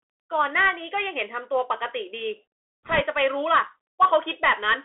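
From start to end the speech carries the sound of a Bluetooth CVSD headset codec: a one-bit delta coder, fitting a 64 kbps stream, whose step size chases the waveform. Only about 250 Hz to 3.5 kHz survives, s sounds turn scratchy, and a grainy hiss sits underneath. Unlike ordinary phone-band filtering, the loss comes with this slope-overload roughness.

From 2.85 to 3.01 s, bit errors on a Bluetooth voice link add a rushing crackle, at a rate of roughly a percent or two. Because each flipped bit nudges the signal only slightly and the error fades quickly, it sounds like a burst of hiss rather than the sharp clicks of dropped packets.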